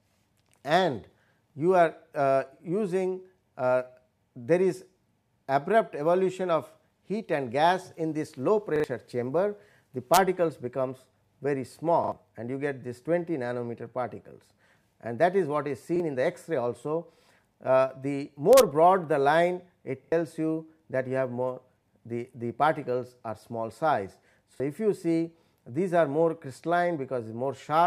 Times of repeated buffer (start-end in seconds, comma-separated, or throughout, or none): 8.76-8.84, 12.04-12.12, 15.96-16.00, 20.04-20.12, 24.56-24.60